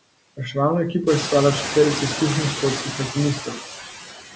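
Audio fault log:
throughout — noise suppressor artifacts: the room noise, which swells at about 1 s, is pulled down by about 16 dB between phrases and lifts back under the voice.
2.82–3.16 s and 3.35–3.65 s — speech cut by the noise suppressor: just after "je sestavljala četverica izkušenih", the suppressor takes quiet speech for noise and turns it down by about 12 dB, then about 16 dB, over around 150 ms and 200 ms. Those sounds come out swallowed and faint.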